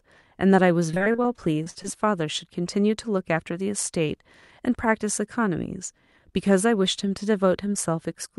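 From 0.91 to 1.86 s the speech turns choppy and robotic, with pieces missing. This is repeated packet loss: eleven gaps, the longest 48 ms, each patched by stretching the previous sound, concealing roughly a quarter of that stretch.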